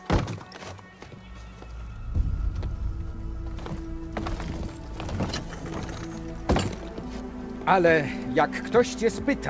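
No technical faults are audible.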